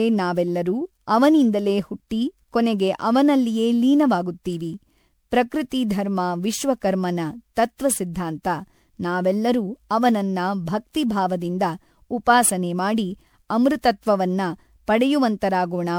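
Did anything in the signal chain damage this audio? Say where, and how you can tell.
Yes. Throughout the speech the sound is swirly and hollow, with a watery smear on consonant onsets and a grainy haze that seems heavier than a single encode at this quality should leave. The spectrum stops at about 20.8 kHz, which fits an MP3 at around 128 kbit/s. This is the codec stage, likely generation loss: the audio decoded and re-encoded around ten times, each pass quantising on a shifted frame grid so spectral holes and noise accumulate.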